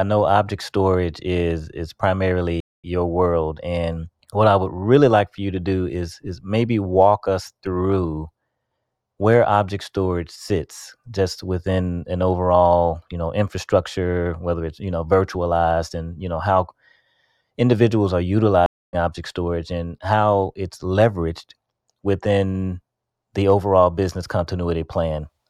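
At 2.60 s the speech drops out for 223 ms, a stream reconnect. It returns at "your world", roughly 0.2 s further on. At 18.66 s a 268 ms gap recurs before "object storage and how", skipping about 0.15 s. Each time the link broke and a fresh decoder resumed mid-stream.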